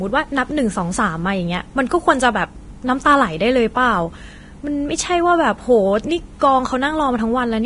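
Throughout, heavy Vorbis compression likely turned the treble into hiss. The speech sounds grainy, and a spectrogram shows noisy upper bands ending abruptly at 10.6 kHz.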